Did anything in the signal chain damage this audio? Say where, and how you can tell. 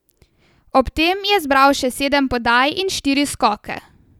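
No, nothing along the way seems to have touched this speech recording, and there's nothing to point at.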